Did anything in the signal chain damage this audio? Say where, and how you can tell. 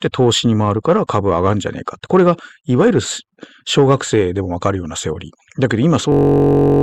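Yes. At the driver or buffer stage there's a system hang loop from 6.12 s to the end at 6.83 s. A 21.33 ms slice repeats 33 times, giving a steady buzz at 46.9 Hz, which fits a 1024-sample buffer. Around 0.7 s of real sound is lost.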